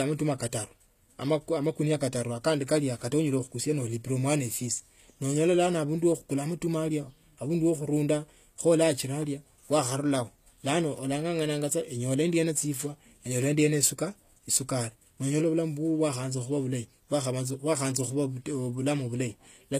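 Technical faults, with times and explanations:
Throughout, low-bitrate audio saved at a high bitrate: likely a low-bitrate encode re-saved as MP3, so the first encode's artefacts remain, with nothing above 14.9 kHz.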